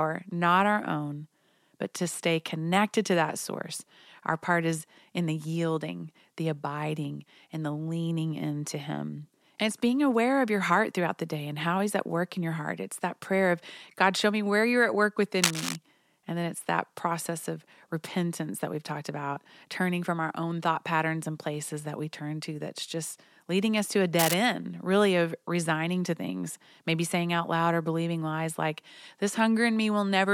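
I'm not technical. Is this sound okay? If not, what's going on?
No. Two short scratchy, rustling bursts, about as loud as the speech, cut in from 15.42 to 15.76 s, after "where you're at work", and from 24.19 to 24.35 s, between "leading us to a" and "end really of resigning". This is cable scratch noise, likely from a worn cable or connector being moved.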